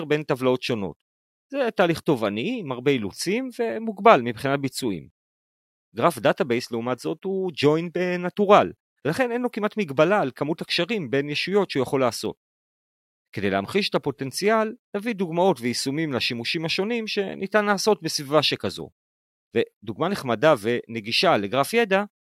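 Speech clip, no technical faults.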